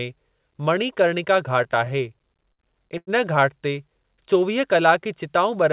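From 1.64 to 2.62 s the speech falls into repeated stalls, a stutter: packets kept arriving later than they were due, so the jitter buffer ran dry eleven times and the receiver kept extending the last sound to cover the waits. About 158 ms is filled this way, roughly a sixth of the span, with the longest hold 60 ms. Nothing is lost, but the speech drags and hiccups. A spectrogram shows short stretches of smeared, repeated harmonics breaking up the normal flow, and the waveform shows held segments that dip in level during the longer waits.

At 2.98 to 3.10 s there is a single short stall from a late packet. One packet missed its slot and the buffer emptied, so the receiver stretched the preceding sound for 94 ms until the packet arrived, then resumed from the same point. It is heard as one syllable held too long with a slight buzz or dip. On a spectrogram it appears as a flat, frozen band of harmonics about a tenth of a second wide. 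The waveform shows a repeated, slightly sagging cycle pattern there. Throughout the clip the call path leaves nothing above 4 kHz, which fits a narrowband telephone codec such as G.711.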